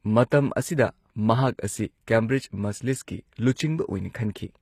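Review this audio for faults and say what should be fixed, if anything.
The whole clip has a gritty, metallic top end on the speech, and the s sounds come out lispy rather than crisp, even though the treble still extends to about 20.6 kHz. That's likely HE-AAC compression: the codec keeps only the lower spectrum and fakes the highs by copying lower bands upward, so the rebuilt harmonics don't line up with the real ones. The damage is plainly audible and fits a low rate of around 24 kbps. To prevent it, export from the original source at a higher bitrate, or use a codec that doesn't rely on band replication.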